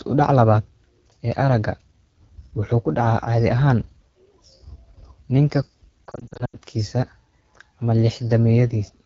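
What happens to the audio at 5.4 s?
At 5.4 s the speech carries AMR wideband (HD Voice) codec damage, present throughout the clip. The sound points to one of the codec's lowest rates, near 8.85 kbit/s. Too few bits model the voice there. Speech sounds rough and raspy, and the top band is thin shaped noise.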